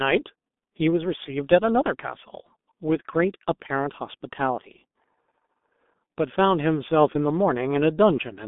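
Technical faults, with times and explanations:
Throughout, G.723.1 codec: the speech is muffled and hoarse, with smeared consonants. The heavy low-rate coding, which fits about 6.3 kbit/s, updates its voice model slowly. On a spectrogram, energy sits between 200 Hz and 3.6 kHz, with nothing above 3.7 kHz.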